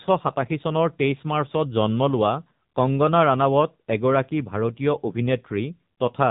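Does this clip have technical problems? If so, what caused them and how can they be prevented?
Yes. Throughout the speech, the sound carries AMR narrowband mobile codec damage. Nothing above about 3.8 kHz survives, which gives the thin telephone quality, and the voice has a plainly buzzy, synthetic edge. This codec rebuilds speech from a vocal-tract model excited by a handful of pulses per 5 ms subframe, and the coarseness here points to one of the lower AMR-NB modes, around 7.4 kbps. To prevent it, record locally or use a wideband, higher-bitrate path instead of a mobile voice call.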